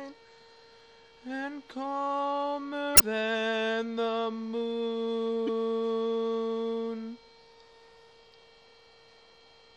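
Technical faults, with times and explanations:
2.94–3.01 s and 5.45–5.49 s, damaged data in a compressed stream: two short glitches where bad bytes in the encoded stream trip up the decoder. It misreads those frames, loses its place, and spits out garbage until it locks back onto a valid frame header.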